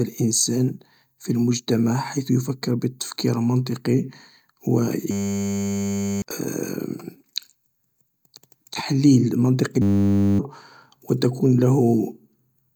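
System hang loops at 5.11–6.22 s and, just after "تحليل منطقي", at 9.82–10.39 s interrupt this speech: a 10 ms slice repeats, heard as a steady 100 Hz buzz, while the frozen system discards roughly a second, then half a second, of audio.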